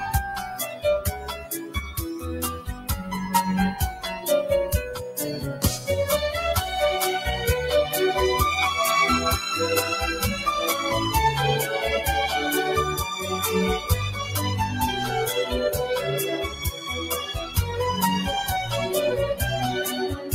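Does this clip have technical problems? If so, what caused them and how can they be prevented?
Yes. A noise suppressor meant for speech was applied to music or sounds across the whole clip, treating steady tones and decays as noise, so levels pump by around 10 dB. A waveform shows a breathing envelope, and a spectrogram shows sustained bands fading between transients. Bypass speech noise suppression for non-speech material.

Sound cut by the noise suppressor occurs at 1.17–1.99 s, 2.58–2.90 s, 5.54–5.88 s, 16.48–16.89 s, 17.27–17.57 s and 20.14–20.35 s, with drops of about 7 to 12 dB as held sound sinks. These appear as dimmed spectrogram patches and pinched waveform sections. Disable the suppressor or switch to a music mode.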